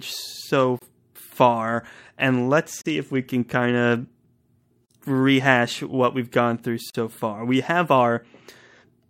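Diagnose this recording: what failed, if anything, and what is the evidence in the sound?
Gap at a join of encoded pieces, at 0.79–0.82 s, 2.82–2.86 s (after "so far and let's", before "if we can kind"), 4.86–4.90 s (before "rehash what we've gone") and 6.90–6.95 s (after "what we've gone through"). The speech drops out for 26 ms at the first join and 43 ms at the others, then resumes exactly where it stopped. The gaps fall every 2.0 s, so this is a codec-stage joining fault: separately encoded segments were concatenated without trimming each encoder's start delay and final-frame padding.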